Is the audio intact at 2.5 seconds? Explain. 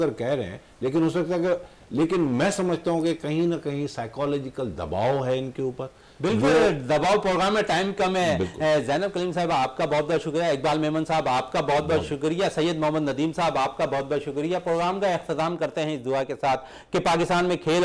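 Yes, at 2.5 seconds the audio is intact, with no dropout, click, distortion or other fault to be heard at that moment.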